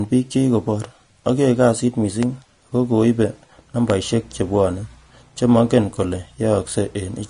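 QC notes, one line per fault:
Throughout: Vorbis compression, likely at a low bitrate around 34 kbps. Nothing is heard above 10.5 kHz, and the remaining treble is coarsely quantised into hissy, grainy noise that roughens the speech. The dulled top end and constant, spread-out grit distinguish it from added background hiss.
2.23–2.25 s and 3.90–3.92 s: loud pop, each a single sharp click about 15 dB above the speech, the second just before "chebwone che mongen kole". The speech continues unbroken underneath, which points to a brief voltage spike, likely from a switch, static or a driver glitch, rather than a dropout.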